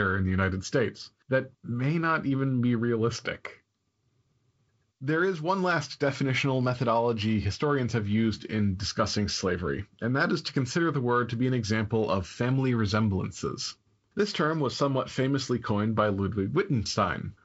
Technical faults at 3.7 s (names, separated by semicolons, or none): de-emphasis applied wrongly